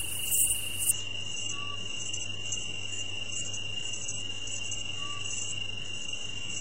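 An everyday sound recording. At 0.91 s the quality drops suddenly, with no gap, and stays low to the end. Nothing remains above 8 kHz, and codec artefacts rise. This is an adaptive stream at a lower bitrate, which fits a switch from around 96 kbit/s AAC to around 8 kbit/s HE-AAC.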